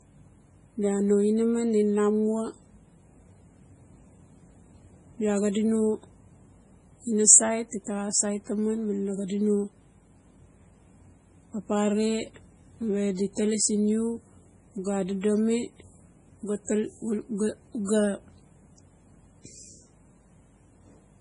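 From start to finish, the speech has nothing above 10.5 kHz. Weak frequency detail flickers in and out between frames. That gives a watery, swirly texture, and s sounds chirp metallically. The likely cause is heavy MP3 compression, which fits a bitrate near 24 kbps.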